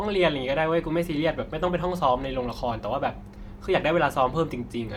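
From start to finish the speech has a grainy, breathy edge in its upper frequencies, where fine detail is smeared into a hiss instead of sounding crisp. The damage is plainly audible, though the band still reaches about 20.2 kHz. This is likely Bluetooth LC3 compression, the LE Audio codec. It splits audio into short blocks, fitting a 10 ms frame, and at a rate that suggests roughly 48 kbps it replaces weak high-band content with shaped noise.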